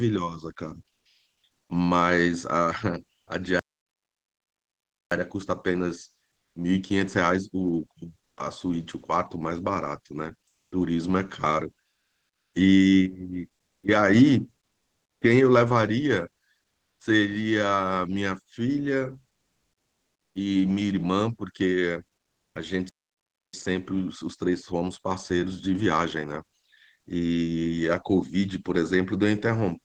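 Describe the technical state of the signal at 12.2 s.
At 12.2 s the real background is gone, and comfort noise fills the gap from 11.91 s to 12.51 s, about 0.6 s. The room's faint detail gives way to a steady, featureless hiss, shifted in level by about 2 dB. The cause is likely discontinuous transmission. The sender goes silent when no speech is detected, and the receiver synthesises noise roughly matched to the background until the sound resumes.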